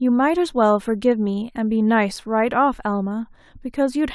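Speech recording; no technical faults detected.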